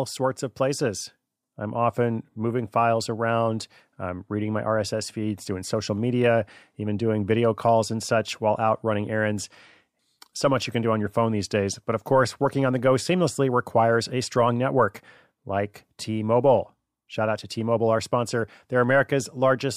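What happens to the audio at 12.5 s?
Nothing goes wrong at 12.5 s: the speech continues intact through that moment, with no dropout, click, glitch or other fault to be heard.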